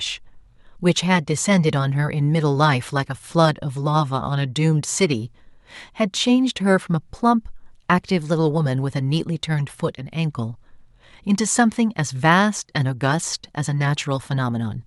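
No technical faults are audible.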